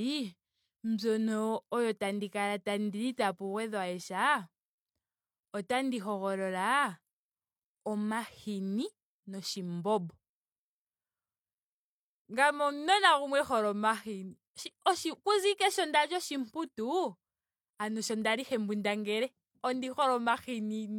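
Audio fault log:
No faults found across the speech recording.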